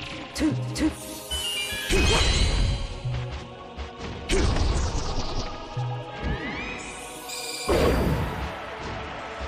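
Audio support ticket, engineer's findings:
Listened through the whole ticket sample and found nothing to flag, so there's no fault to report here.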